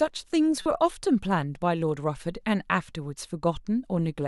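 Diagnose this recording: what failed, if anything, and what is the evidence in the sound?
The codec stage failed here, in the form of a corrupt frame decoded. There's a brief burst in the speech from about 0.62 to 0.66 s, roughly 36 ms, which lines up with a couple of damaged frames. Its error peaks at roughly -20 dBFS. Flipped bits in those frames gave the decoder bad gains or codes, and it played them anyway, so energy landed at the wrong frequencies.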